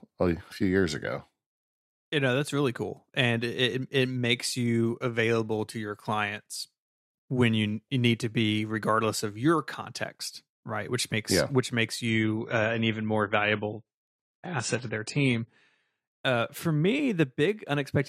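At 12.08 s, right after "makes yeah which makes", the speech drops to an adaptive stream at a lower bitrate until 16.08 s, with no gap at either join. The treble thins, which points to a step from roughly 96 down to about 24 kbit/s. On a spectrogram, everything above 10 kHz vanishes abruptly for those four seconds before returning at "uh for".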